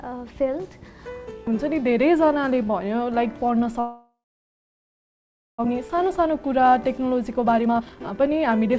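From 3.80 to 5.66 s the sound cuts out. A short fading buzz stretches the last bit forward, then there's about 1.4 s of near silence, and when it comes back roughly a second of material is simply gone. That's likely a long network dropout.

Right after, from 5.75 to 8.75 s, there's a jitter buffer speed-up. The receiver snips tiny pitch-period slices again and again to claw back around 0.7 s of built-up delay. Everything plays at 124% speed at the same pitch and sounds noticeably rushed. Throughout, the G.722 call path keeps everything below 8 kHz.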